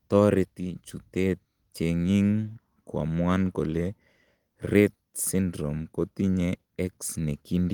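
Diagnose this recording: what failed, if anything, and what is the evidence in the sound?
Nothing failed; no fault is audible anywhere in this recording.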